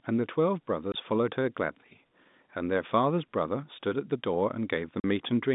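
Packet loss filled with silence occurs at 0.92 to 0.94 s and again at 5.00 to 5.04 s. The receiver played dead silence where data never arrived, so the narrowband telephone speech, topping out near 3.7 kHz, is cut by 20 ms and 40 ms holes with hard edges. These durations fit one and two lost 20 ms packets.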